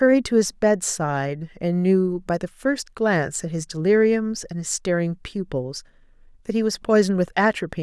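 Speech recording, no technical faults found anywhere in it.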